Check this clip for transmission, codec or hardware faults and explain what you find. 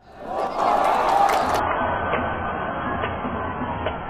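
Two faults stand out here.

Between 0.47 and 0.58 s the sound suddenly drops by about 6 dB and then snaps back. That's a classic case of one channel dropping out. When the stereo signal gets folded to mono, anything shared by both sides loses half its contribution, and anything carried only by the missing side vanishes. It's brief, a bit over a tenth of a second, and most likely a momentary loss on one side of the stereo link.

From 1.59 s to the end, the audio abruptly turns dull and smeary, with nothing left above 3.4 kHz. There's no gap, just a sudden step down in quality. That points to an adaptive stream at a lower bitrate: the player switched to a much leaner encoding when the connection slowed. Something around 16 kbit/s AAC would fit the lost treble and the extra codec artefacts.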